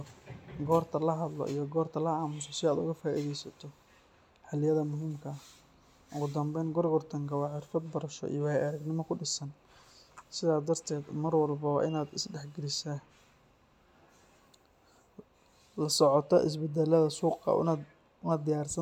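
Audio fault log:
No faults turn up anywhere in this speech recording, so there's nothing to log here.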